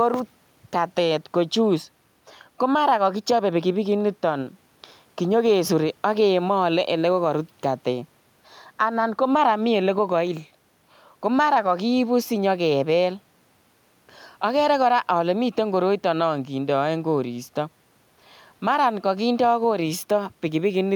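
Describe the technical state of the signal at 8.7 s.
At 8.7 s the speech signal is intact, with no technical fault present at that moment.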